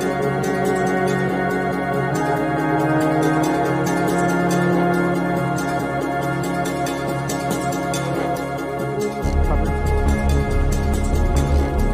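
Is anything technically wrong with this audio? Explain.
No, nothing in this audio points to a technical problem in how the signal was captured, processed or delivered.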